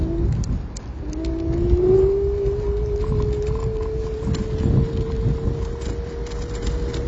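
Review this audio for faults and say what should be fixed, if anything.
Throughout, the sound is dull and smeared with plainly audible warbling or fizziness, likely from AAC compression at a low bitrate near 24 kbps. A spectrogram shows a hard ceiling at 8 kHz. Encode at a higher bitrate, or keep an uncompressed master.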